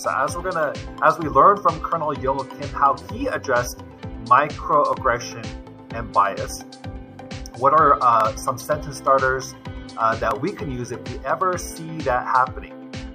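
At 4.93, 8.21 and 10.31 s there's a single sharp click, each a thin vertical streak in the spectrum. Likely dropped samples: well under a millisecond goes missing, so the waveform jumps straight to a later value and snaps audibly.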